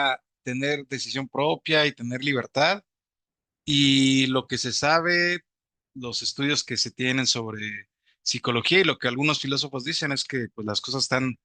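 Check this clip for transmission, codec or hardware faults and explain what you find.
Nothing in the speech points to a fault in how it was sent, encoded or recorded. There is nothing that needs explaining.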